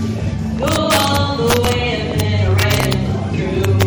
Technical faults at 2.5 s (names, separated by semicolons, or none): MP3 compression; compressed frames skipped; integer overflow